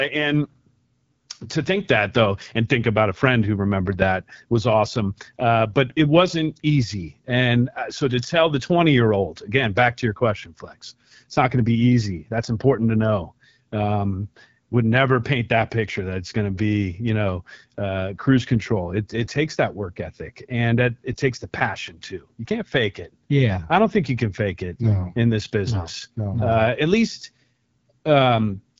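Speech runs through the whole clip, and all of it carries the sound of the AMR wideband (HD Voice) codec. Nothing is present above 7.5 kHz. The band above 6.4 kHz is filled with shaped noise, not real detail. Below that, a pulse-excited vocal tract model rebuilds the signal. The damage is plainly audible. The sound is rough and raspy, which points to one of the codec's two lowest modes, about 8.85 kbit/s.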